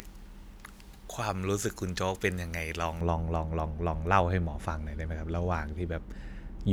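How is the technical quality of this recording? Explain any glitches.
The recording has one clear fault: pre-emphasis left on, from the start to about 3.01 s. The treble lift applied before storage or transmission was never undone, so the highs sit about 11 dB above 1 kHz at 10 kHz, which fits a J.17-type curve. The speech sounds thin, bright and hissy on sibilants. Unlike a low-cut filter, the bass is intact. The brightness comes from a gradual rising shelf, and it ends abruptly at 3.01 s.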